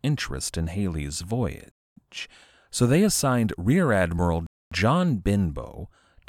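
At about 1.72 s the speech just drops into dead silence until 1.97 s, and the same thing happens again from 4.47 to 4.72 s. That's a gap between chunks. The audio seems to have been delivered in 2.5-second pieces, with a 250 ms hole of silence inserted at each join. Nothing's actually missing; the speech just pauses and picks up where it left off. Both holes land at the same spacing.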